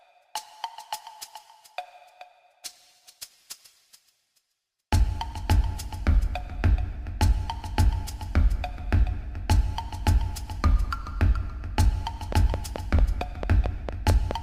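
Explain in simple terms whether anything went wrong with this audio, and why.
Something in the recording chain was likely injecting short pulses, perhaps interference from nearby equipment or a faulty connection or power supply. From 12.32 to 14.32 seconds this creates a train of clicks: about ten evenly spaced ticks, 4.5 per second, clearly louder than the sound.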